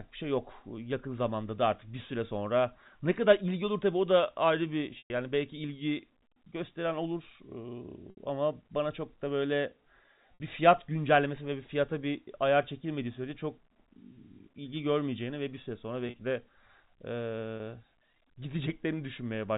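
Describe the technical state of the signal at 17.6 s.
At 17.6 s there's a brief packet loss with pitch repetition, running from 17.57 to 17.60 s. About 30 ms of audio went missing, which fits three 10 ms packets, and the receiver looped the last pitch period across the hole, so you hear a short, slightly held, buzzy note.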